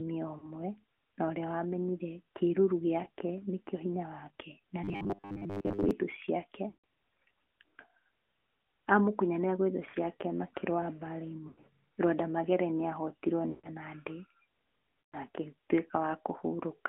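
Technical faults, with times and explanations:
Throughout: AMR narrowband mobile codec. The spectrogram shows nothing below 250 Hz or above 3.4 kHz. Coding is plainly audible at what sounds like about 10 kbps, giving buzzy, synthetic speech with smeared harmonics.
4.84–5.91 s: robotic sound from repeated short buffers, between "wake na" and "thũ ciake". The speech becomes a rigid metallic buzz at 100 Hz. It is likely caused by a 10 ms block being repeated while most of the real audio is skipped. A spectrogram shows evenly spaced harmonic stripes, and the waveform shows identical cycles.
0.38–0.48, 3.04–3.08, 6.70–6.81 (just after "thũ ciake"), 9.90–9.96, 11.48–11.67, 13.50–13.69 and 15.05–15.16 s: lost AMR speech frames. Between 20 and 140 ms of speech is missing each time. The decoder stretches the last good sound with falling gain, so you hear a dip or warble. On the waveform, the envelope fades, and the spectrogram shows frozen formants.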